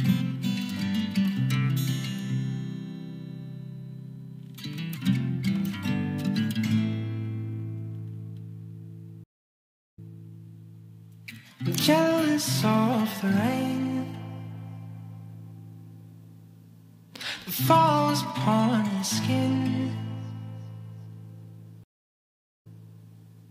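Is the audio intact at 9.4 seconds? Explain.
No. A stream reconnect runs from 9.24 to 10.21 s. The connection dropped, leaving about 0.74 s of silence, and a fresh decoder resumed the audio 0.24 s earlier, repeating a short stretch.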